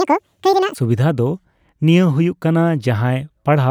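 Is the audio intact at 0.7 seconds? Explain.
No. At 0.7 seconds the audio sits inside a section at the wrong speed, running from the start of the clip to 0.75 s. That stretch of speech plays at twice its recorded speed, so it is both hurried and raised in pitch by roughly ten semitones, giving a thin, chipmunk-like quality. Because speed and pitch shift together, the likely cause is this segment being resampled or played against the wrong clock.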